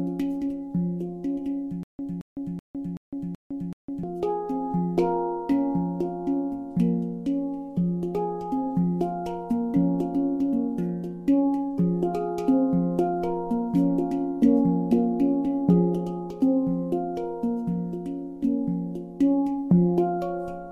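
From 1.83 to 4.04 s there's a stutter with silent gaps: a 222 ms burst of sound plays six times over, each followed by about 157 ms of dead digital silence, so it ticks along every 379 ms. The likely cause is a stalled stream replaying its last fragment on each retry, and whatever should have played there is gone.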